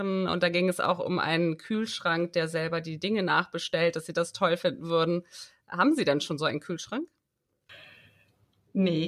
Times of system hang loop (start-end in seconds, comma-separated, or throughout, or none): none